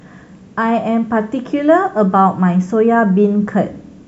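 Nothing in the speech stood out as a technical fault on listening.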